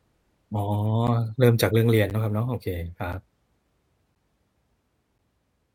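From 1.07 s to 5.19 s the speech carries periodic USB or driver dropouts, about five of them, spaced 1.02 s apart. Each time, something stalls the USB transfer or the audio driver, and roughly 10 ms of signal is lost and replaced by silence. The result is a regular tick or small pop, heard wherever a gap lands while the speech is sounding. The fixed spacing points to a recurring background task.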